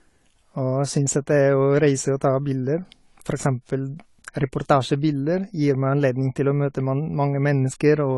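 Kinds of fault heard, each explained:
AAC compression: the speech is dull and smeared throughout, with a fizzy, warbling edge on sibilants and nothing above 11.5 kHz, likely from AAC-LC coding near 32 kbps. Unlike a plain low-pass filter, the damage shifts from frame to frame, leaving patchy spectral holes.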